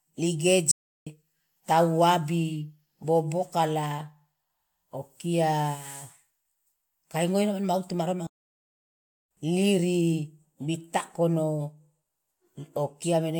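Playback stalls at 0.71–1.07 s and 8.27–9.31 s cut the speech to silence mid-flow for about 0.35 s and 1.04 s, likely from the player running out of data.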